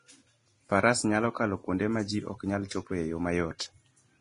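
Low-bitrate audio saved at a high bitrate runs throughout the speech: the container is a high-rate MP3, yet nothing is present above 10.6 kHz, and the artefacts of a starved codec remain. This likely comes from an earlier low-rate encode, which points to something near 30 kbit/s, later re-saved at around 256 kbit/s. The larger second file keeps the missing top end and the earlier artefacts exactly as they were.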